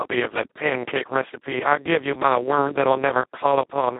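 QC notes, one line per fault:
Throughout: Speex codec damage, heavy. The speech sounds hoarse, buzzy and close to robotic, as if a vocoder were rebuilding it. The codec has almost no bits left for the excitation signal, which fits a rate near 2 kbps. The band is narrowband, about 250 Hz to 3.6 kHz, with nothing above 3.8 kHz. That rules out the shaped noise fill a wider Speex mode would add, and the robotic texture sets it apart from a plain band-limited phone line.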